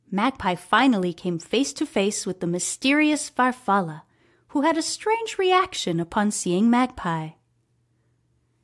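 Nothing technically wrong turns up anywhere in this short speech recording, so there's no problem to point to and no time to mark.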